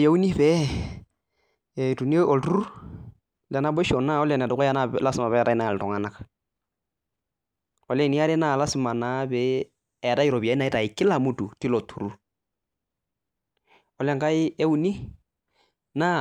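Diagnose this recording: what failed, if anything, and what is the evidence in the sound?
Nothing in the speech recording points to a failure at any stage from capture through playback.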